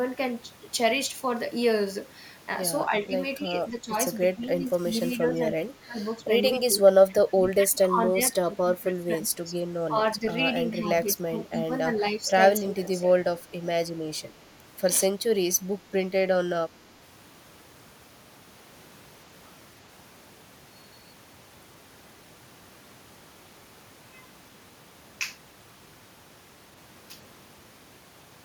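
Speech dips at 2.89–3.96, 4.35–6.23, 6.66–9.59, 9.9–10.45 and 10.77–13.14 s, by up to about 20 dB, in broken patches rather than clean gaps. This is likely speech suppressed in double talk, where an echo canceller could not separate the local talker from overlapping far-end echo and turned both down. Unlike a network dropout, the audio ducks in pieces within the speech rather than in one clean gap.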